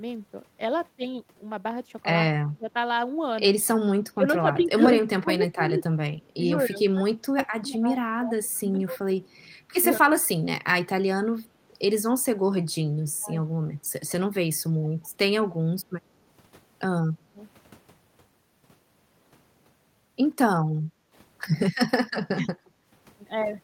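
Speech suppressed in double talk, 2.25 to 10.68 s: the voice repeatedly sinks by roughly 25 dB, losing about four seconds in total in broken pieces, likely because the echo canceller, facing both sides at once, turned down the talker along with the loudspeaker echo.

Echo leak, 9.28 to 9.46 s: a very faint copy of the voice, around 40 dB down, trails it by 146 ms, likely residue the far side's canceller failed to remove from its loudspeaker pickup and sent back.

Background gated by the echo canceller, 11.47 to 11.53 s: the room sound briefly dips by about 7 dB and recovers, as the canceller clamped the microphone while the loudspeaker played.

Speech suppressed in double talk, 13.06 to 15.11 s: the voice drops by roughly 25 dB in fragments, adding up to well under a second, likely again the canceller treating overlapping talk as echo.

Speech suppressed in double talk, 17.13 to 17.43 s: a short cut of the same kind, roughly 25 dB deep, likely from the canceller misjudging simultaneous talk.

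Background gated by the echo canceller, 20.84 to 21.15 s: the ambience falls by about 8 dB for around a third of a second before returning.

Speech suppressed in double talk, 22.28 to 22.49 s: the voice nearly vanishes for about a fifth of a second, roughly 35 dB down, likely the canceller attenuating the talker during double talk.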